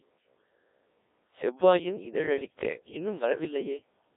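From start to finish, the speech passes through a Codec 2 vocoder. Heavy damage is audible. No waveform survives. The decoder rebuilds the voice from pitch, voicing, energy and a coarse spectral envelope, then synthesises it from sine waves. The result is robotic and buzzy. The band is confined to about 300 Hz to 3.7 kHz, with nothing above 3.8 kHz. The coarseness fits the 1.3 kbit/s mode.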